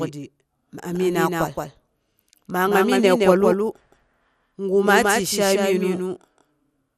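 Doubled audio track, throughout: a second full-band copy of the speech trails about 150 ms behind at roughly 5 dB lower, likely from a second, slower capture path.

MP2 compression, throughout: starved sub-bands switch off, leaving nothing above 15 kHz and a dull, gurgling granularity, consistent with an 80 kbps MPEG Layer II encode.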